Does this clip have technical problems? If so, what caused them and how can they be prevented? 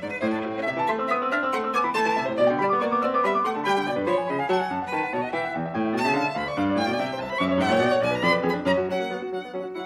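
No, this music clip has no audible technical faults, so there is nothing to trace or prevent.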